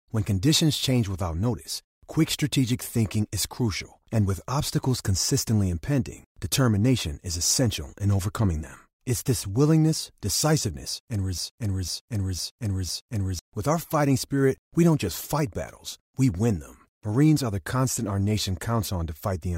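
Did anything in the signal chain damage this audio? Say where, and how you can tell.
Yes. From 11.38 s to 13.39 s there's a broken-record loop: a 503 ms slice of the speech plays four times back to back, identical each pass, so you hear the same half-second stutter over about two seconds. That points to the playback or streaming buffer stage. The likely cause is the player or stream stalling and re-sending the last chunk it held, and whatever should have played in those two seconds is simply gone.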